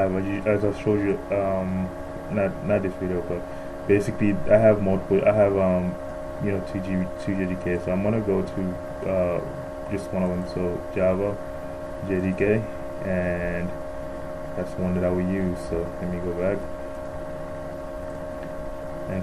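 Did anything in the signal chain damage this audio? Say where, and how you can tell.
Yes, at the codec stage: the whole clip sounds dull and gurgly, with upper bands flickering out. That's likely MP2 compression starved of bits, consistent with roughly 80 kbps.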